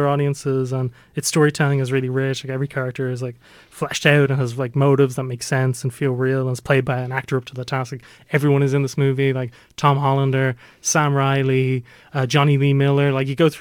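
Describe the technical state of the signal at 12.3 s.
At 12.3 s you're hearing sample clock jitter, and it's not local; it runs through the whole clip. The converter's clock wobbles by a couple of microseconds, so each sample lands a touch early or late, and the error scales with how steeply the waveform is moving. On this speech it shows up as a grainy hiss riding on louder and brighter moments, sitting roughly 35 dB under the signal and dropping away in the gaps.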